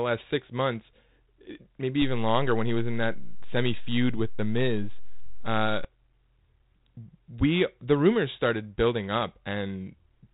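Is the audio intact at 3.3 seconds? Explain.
No. At 3.3 s the clip sits inside a DC step running from 2.02 to 5.85 s: the waveform's zero line jumps. The step gives a low thump while the speech continues unchanged, and on a waveform the trace shifts off-centre at the step.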